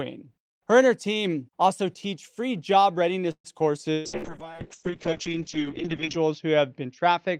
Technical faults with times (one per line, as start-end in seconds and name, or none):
3.31-3.47 call audio freeze
3.92-4.26 burst of packet loss
4.04-7.40 call bitrate drop